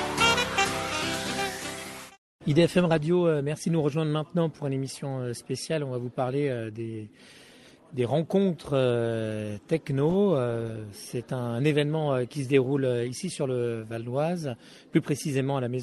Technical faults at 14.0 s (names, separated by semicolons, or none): none